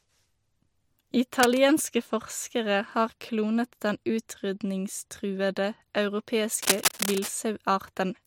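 At 1.40 to 1.58 s, just before "forskere har klonet den", a short burst of cable scratch noise rustles over the speech a little below its level. A longer one from 6.54 to 7.29 s is roughly as loud as the speech. Both are dense, irregular scratching, likely from a worn cable or connector being moved. Unlike steady hiss or evenly spaced clicks, the noise comes in uneven clusters.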